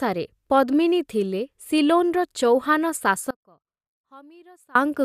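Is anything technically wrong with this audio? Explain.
Yes. The speech has an audio dropout to a faint residue from 3.31 to 4.75 s, lasting about 1.45 s. The signal likely broke off upstream while the path after the break stayed live. The speech cuts out abruptly, leaving only a faint leak roughly 30 dB down.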